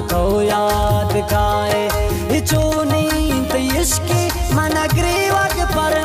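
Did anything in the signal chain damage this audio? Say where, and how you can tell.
Yes: word clock ticks from an unlocked digital link, where receiver and sender clocks differ by roughly a tenth of a percent, slipping one sample about every 20 ms from 0.10 s to 6.05 s.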